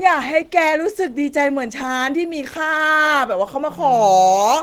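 Speech runs through what is likely Opus compression for the whole clip. The encoder appears to be in its hybrid speech mode at a low bitrate that fits about 16 kbps, so the speech sounds plainly muffled and hoarse, even though the band still extends to 20.2 kHz.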